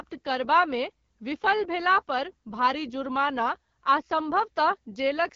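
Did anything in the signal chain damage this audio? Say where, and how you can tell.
Yes. The damage comes from the codec stage: this speech has been through the AMR wideband (HD Voice) codec at a low rate, and the sound points to 8.85 kbit/s. Nothing is present above 6.8 kHz throughout the clip. The codec damage is plainly audible as a rough, raspy texture, because at this rate the pulse excitation driving the vocal tract model is coarsely quantised. The top band above 6.4 kHz is filled with shaped noise, not real signal.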